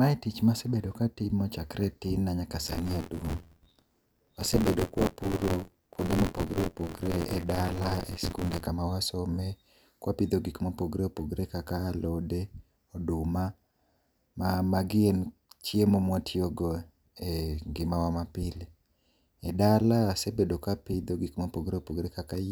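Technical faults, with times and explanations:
2.66–8.67 s, buffer tearing: Just after "e tin na nyaka", the speech takes on a robotic buzz at about 86.1 Hz. The writing program and the playback hardware have slipped out of step, so they cross inside every buffer period. The buzz rate fits a 512-sample buffer. In each period, roughly a fifth of the audio is stale, from around 20 ms earlier. Hard joins on both sides of that stale stretch repeat at the buffer rate, which creates the rattle. It sounds only while speech is present.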